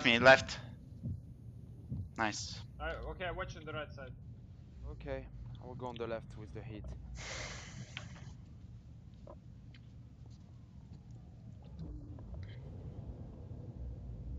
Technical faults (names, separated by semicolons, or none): none